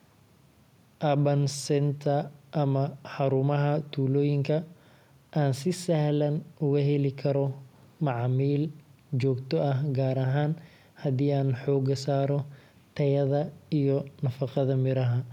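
No technical faults can be heard anywhere in the speech.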